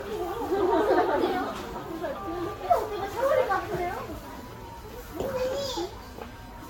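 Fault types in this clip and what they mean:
generation loss: The whole clip sounds swirly, smeared and hollow, with blurred attacks and nothing above 17.2 kHz. This likely comes from repeated lossy Vorbis encoding, around seven passes near 67 kbit/s. Each pass re-quantises on a shifted frame grid, so artefacts stack up.
computer activity noise: From 4.24 s to the end, a buzzing whine appears, pulsing at about a thousand times per second. It sits roughly 30 dB below the sound. It tracks computer load disturbing the shared audio ground, not the sound itself.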